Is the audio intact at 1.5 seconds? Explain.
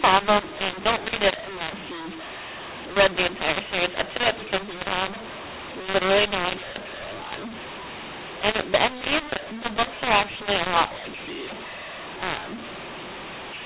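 No. A mu-law and A-law mix-up affects 1.5 s, as it does the whole clip. The audio was coded with G.711 mu-law but decoded as A-law, so each 8-bit code is expanded on the wrong logarithmic curve. Some levels come out too large and others too small, and the quietest samples are raised well above silence. The speech sounds harsh and distorted, pauses fill with noise, and the 4 kHz telephone band remains.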